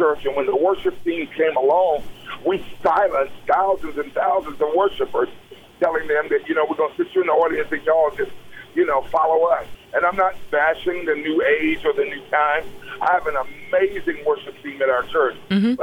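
No technical faults turn up anywhere in the audio, so there is nothing to describe in time order.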